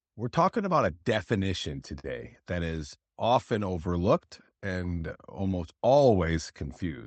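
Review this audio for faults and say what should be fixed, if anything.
A short stall from a late packet occurs between 1.99 and 2.05 s. A packet arrived after its playout time, the jitter buffer ran dry, and the receiver stretched the preceding speech by about 44 ms while it waited, then resumed exactly where it left off. Nothing is lost, but that stretch of speech is held unnaturally long and may carry a faint buzz or dip, and everything afterwards plays about 44 ms later. The call codec's band limit near 8 kHz is present throughout. To prevent it, give the jitter buffer more headroom or fix the network path causing the late delivery.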